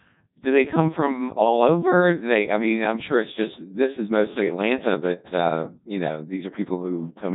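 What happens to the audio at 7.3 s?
Codec 2 vocoder processing is present at 7.3 s, as it is across the whole speech clip. Codec 2 sends only pitch, voicing, energy and a coarse spectral envelope. The decoder then rebuilds the voice from sine waves, so the original waveform is lost. The damage is heavy, with a robotic, buzzy quality that fits a low 1.2 kbit/s mode, and nothing is left above 3.8 kHz.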